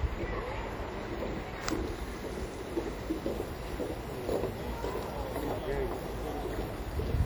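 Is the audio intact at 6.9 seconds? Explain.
No. At 6.9 s, as across the whole clip, there is plainly audible damage from what is likely WMA compression. The transform coder's quantisation noise smears over tens of milliseconds, giving a ringing, washy texture with breathing hiss, which fits a low bitrate near 48 kbps.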